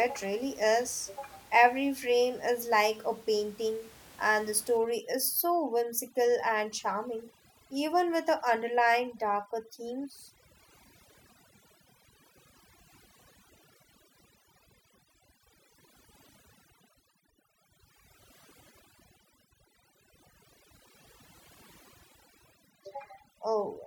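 A speech recording, with room noise sitting about 26 dB below the voice in the opening seconds. From 4.77 s to the end, overdone noise removal takes over. Bands near the noise floor are pushed down hard. The background in the gaps drops and breaks up into twinkling specks.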